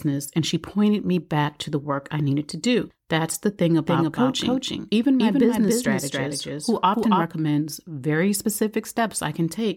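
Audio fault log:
3.87–7.25 s, doubled audio track: just after "the thing", a second copy of the speech, likely captured again through a slower path, gets mixed in at roughly 300 ms behind the original and about 5 dB quieter. Because that copy is full-band with no decay or room colour, it reads as a distinct, overlapping repeat rather than reverb. It cuts in and out abruptly at both ends of the span.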